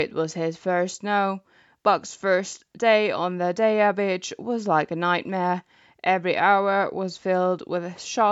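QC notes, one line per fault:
No faults are audible anywhere in the speech. The call microphone processing is working normally, with the lowest bass trimmed away and nothing above 8 kHz.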